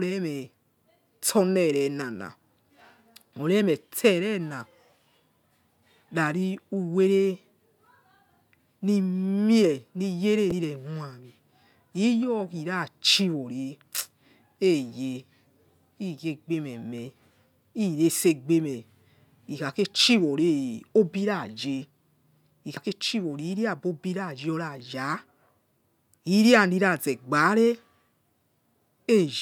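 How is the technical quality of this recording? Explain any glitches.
The speech recording has two brief glitches, both damaged data in a compressed stream. At 10.48 to 10.52 s and again at 22.77 s, corrupted bytes make the decoder misread frames and resynchronise, producing short blips.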